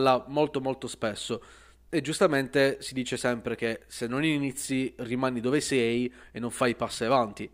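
From 5.91 s, just after "non inizi rimani dove", to the end of the clip, a faint gritty fizz rides on the speech, strongest on louder and brighter sounds. This is crude rate conversion: samples were linearly interpolated without filtering, which fits a 44.1 kHz to 48 kHz change. The result is inharmonic error tones roughly 35 dB below the speech.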